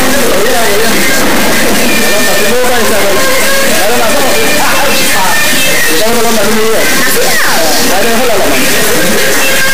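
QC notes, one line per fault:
Throughout, integer read as float: samples stored as 32-bit integers are being interpreted as 32-bit floats, so each sample's bit pattern becomes a meaningless floating-point value. Some are vanishingly small, others invalid or enormously beyond full scale. The output therefore slams between silence and the clipping limit, producing an extremely loud, harsh buzzing square-wave texture that collapses to silence wherever the underlying audio is very quiet.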